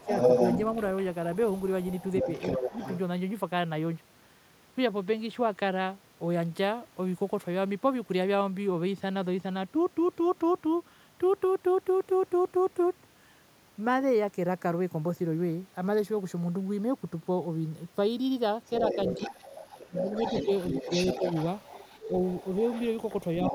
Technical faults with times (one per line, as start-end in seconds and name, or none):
0.00-2.99 other side's voice leaking through
2.58-2.73 speech suppressed in double talk
18.66-23.54 other side's voice leaking through
19.18-19.33 speech suppressed in double talk
19.88-20.08 speech suppressed in double talk
20.85-21.23 speech suppressed in double talk
23.50-23.54 speech suppressed in double talk